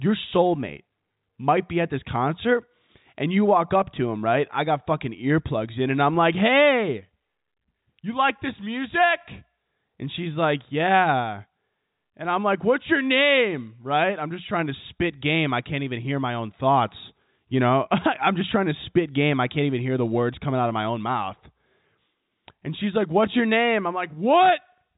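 Nothing stood out on listening to this speech, which comes through the narrow band of G.711 telephone coding with nothing above 3.8 kHz.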